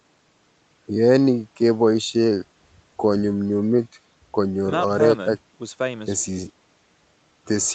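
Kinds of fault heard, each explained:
No faults heard.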